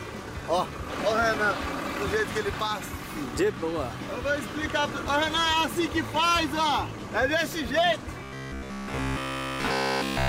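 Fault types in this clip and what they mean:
Robotic sound from repeated short buffers: audio likely arrived too seldom, so a 15 ms slice was looped, turning everything after 8.23 s into a rigid 66.8 Hz metallic buzz.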